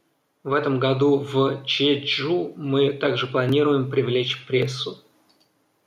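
Gain pumping runs through the whole speech clip. The overall level swings by around 5 dB. The likely cause is input gain set far too high for the microphone, with a fast compressor or limiter clamping down on every peak and releasing in the gaps. Loud and quiet passages sit unnaturally close in level, and the sound comes across squashed.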